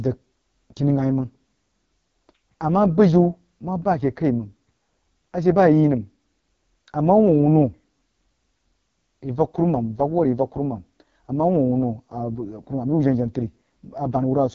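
AMR wideband (HD Voice) codec damage runs throughout: nothing above 7.4 kHz, and heavy rough, raspy coding of the speech, which fits its lowest 6.6 kbit/s mode.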